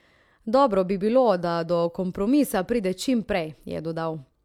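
Nothing in this short bit of speech stands out as a technical fault, so there's nothing here to track down.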